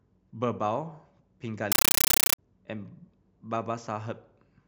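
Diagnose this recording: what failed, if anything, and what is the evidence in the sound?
The speech gets replaced from 1.72 to 2.38 s by a compressed stream played as audio, a playback-side fault on the digital output link. For those two-thirds of a second you hear very loud, chattering static pulsing at 31.25 per second, each burst about 9.3 ms long with silence between. That burst-then-padding rhythm points to an AC-3 bitstream on S/PDIF or HDMI being taken as raw PCM instead of being decoded.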